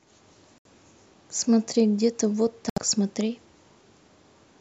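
Audio packets likely reached the Bluetooth headphones too late and were discarded, producing two Bluetooth dropouts, at 0.58 to 0.66 s and 2.70 to 2.78 s. Each cuts an abrupt hole of about 70 ms, fitting three lost frames, and the speech resumes further on as if it had kept playing.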